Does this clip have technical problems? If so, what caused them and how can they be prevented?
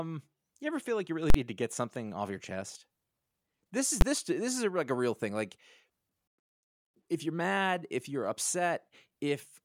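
Yes. At 1.30 to 1.34 s, between "feel like you really" and "to get something off", there is a very loud pop, about 43 ms of dead silence, then a second pop. At 4.01 s, just before "this this is a", a single bang is heard. Both are invalid numbers at full scale: a calculation produced infinite or invalid values, and the output was pinned at maximum amplitude for a whole processing block. The longer event fits a 2048-sample block and the shorter one a 512-sample block, which is too brief to separate into two pops. This can be prevented by checking each block for infinite or invalid values and replacing them with silence or the last good output, and by guarding divisions and feedback paths so they cannot blow up.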